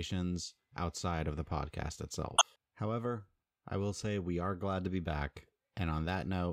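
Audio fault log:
2.36–2.42 s, corrupt frame decoded: a short glitch cuts across the speech for roughly 57 ms, peaking around -10 dBFS. The damaged compressed data was still decoded, so misread gains and codes threw energy into wrong frequencies, which suggests about two frames were affected.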